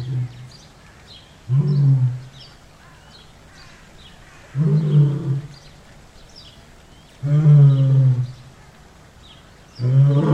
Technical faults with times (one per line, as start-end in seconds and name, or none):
none